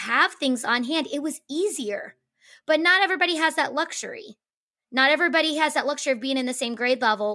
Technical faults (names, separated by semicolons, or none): none